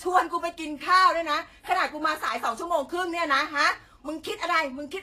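A speech clip with two faults. Throughout, the audio has plainly audible damage from what is likely Vorbis compression: nothing survives above 14.2 kHz, and the treble that remains is so coarsely quantised that its fine detail has turned into noise of similar energy. The result is a hissy, grainy top end, roughened tonal components and softened consonant attacks, which points to a low bitrate in the region of 33 kbps. Separately, from 2.29 to 2.35 s, a 60 ms stretch, the level falls abruptly by about 6 dB and then recovers. That step is likely the signature of one channel dropping out: with one stereo channel briefly lost, the mono sum carries only half of the material common to both sides, and anything present only in the missing channel vanishes for that interval.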